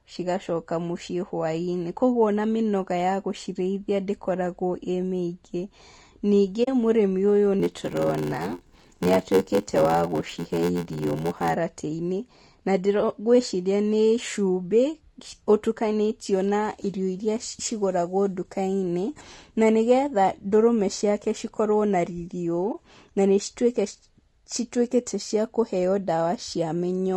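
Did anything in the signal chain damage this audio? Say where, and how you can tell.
Yes. Low-delay AAC compression at the codec stage makes the speech rough and grainy throughout, likely AAC-ELD at around 32 kbps. A spectrogram shows noise filling the gaps between harmonics and a smeared, synthetic-looking top band.

AAC frame loss with muting happens at the network or decoder stage, at 6.63–6.68 s (about 40 ms) and 22.72–22.75 s (20 ms, just before "na nĩ"). The waveform fades to a soft-edged flat hole, and the spectrogram shows a blank column.

A block size mismatch (padded) sits at the driver or buffer stage from 7.59 to 11.55 s. Zero-filled gaps in every block cause an 86.1 Hz buzz and slow the speech to 0.861 speed with the timbre kept, which fits 512-sample reads. The waveform shows evenly spaced dropouts.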